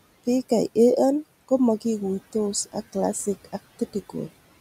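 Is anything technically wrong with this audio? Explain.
Yes. Throughout the speech, a noise suppressor is at work, cutting the background by about 16 dB in every band it judges to be steady noise, frame by frame. The room noise, about 20 dB below the speech, sinks away between words and swells back up underneath them.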